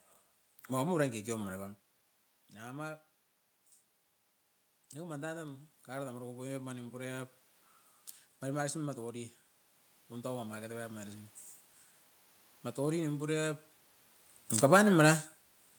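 Automatic gain rising runs from 4.93 to 7.40 s: after the speech input fell by about 12 dB, the gain control judged it too quiet and lifted its gain by about 4 dB over some two and a half seconds, so the voice and room noise swell together.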